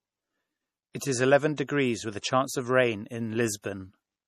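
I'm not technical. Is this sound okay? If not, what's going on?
No. The speech has been squeezed hard by data compression, most likely MP3 compression, and the damage is plainly audible. The encoder saves space by throwing away detail it judges unimportant, so quieter parts of the sound drop in and out from moment to moment, giving a watery, swirly quality. It also removes everything above about 14.1 kHz, so the very top of the sound, the airy edge of s sounds, is missing.

There is also pre-echo at four spots: 0.92 to 0.95 s, 0.99 to 1.01 s just before "is eleven", 1.57 s just after "is eleven", and 3.62 to 3.64 s just after "of rain". The compression works on short chunks of sound at a time and spreads its noise evenly across each chunk. When a sharp sound starts late in a chunk, that noise leaks into the quiet moment just before it, lasting 15 to 30 ms here. You hear this as a brief hiss before the attack, and the attack itself sounds softened or smeared.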